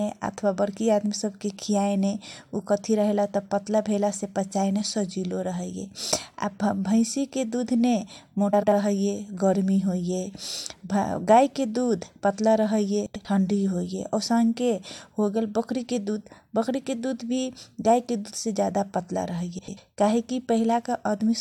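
Speech with a brief garbled flutter at 8.53–8.73 s, 13.06–13.25 s and 19.59–19.78 s: frames out of order, two adjacent 93 ms runs swapped, fitting four-frame blocks.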